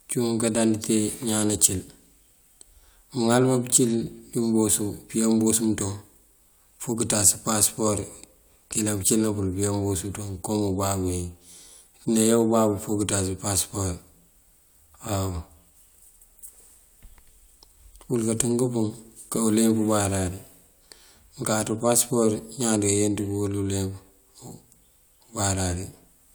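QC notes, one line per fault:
No audible faults found in this speech recording.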